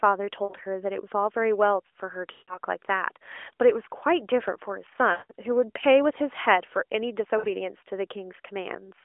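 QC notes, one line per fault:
0.44–0.54 s, 2.32–2.58 s, 5.12–5.33 s, 7.38–7.47 s: lost AMR speech frames. The decoder repeats the last good pitch and vocal-tract settings with shrinking gain, so the sound smears into a held buzz that fades. The 60 ms gaps, which fit three 20 ms frames, are brief. The 160 ms and 180 ms runs fade toward silence and return rough. On a spectrogram, flat, repeated harmonic bands thin out. On the waveform, the envelope decays, then jumps back.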